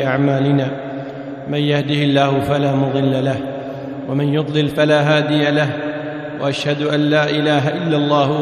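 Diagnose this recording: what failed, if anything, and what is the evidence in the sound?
Nothing in the signal chain shows a fault: no dropouts, clipping, glitches, distortion or timing problems can be heard anywhere in the recording.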